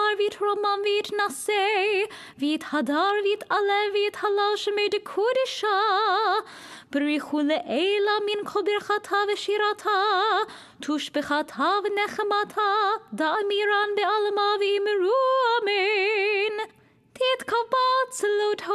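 No faults can be heard anywhere in the recording. Nothing in it calls for a technical explanation.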